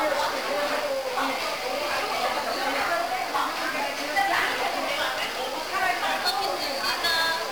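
The audio is fuzzy and crackly throughout, with treble buried under strong broadband hiss. These are the marks of heavy 1-bit DFPWM compression, where each single bit nudges an adaptive level up or down, consistent with a rate near 48 kbps.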